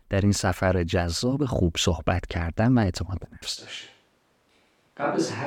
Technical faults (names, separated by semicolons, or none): switch to a distant microphone